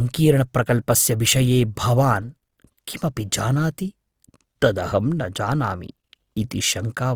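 Throughout the speech, the sound has a rough, grainy texture, with fine noise riding on voiced tones instead of clean harmonics. This is likely Opus compression in its music-style mode at a low bitrate, one that fits about 24 kbps. The encoder keeps each band's energy but fills starved bands with folded or noisy content, so the damage is plainly audible. Unlike MP3 artefacts there is less swirling and fewer watery holes, and the full bandwidth stays open, reaching up to 20.4 kHz.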